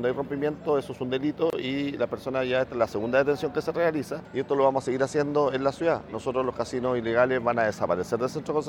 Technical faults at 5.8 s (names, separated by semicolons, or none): none